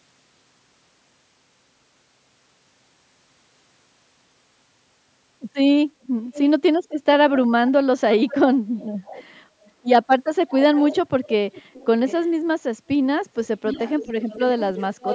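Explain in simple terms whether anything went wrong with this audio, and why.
A faint second copy of the speech trails about half a second behind the original at 6.03–6.41, 8.18–8.37, 8.79–9.24, 9.63–9.71, 10.49–12.3 and 13.34–15.14 s. This is echo leak, likely from a speakerphone whose echo canceller let some of the played-back sound return.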